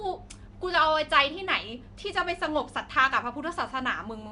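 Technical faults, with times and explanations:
Throughout, Nellymoser compression: the speech has a rough, hissy halo and a smeared, underwater quality, and the damage is plainly audible. The likely cause is the Flash-era Nellymoser Asao codec, at a rate that fits about 44 kbps. It codes short blocks with very few bits and fills starved bands with noise. A spectrogram shows blotchy, noise-filled patches between harmonics and nothing above 10.6 kHz.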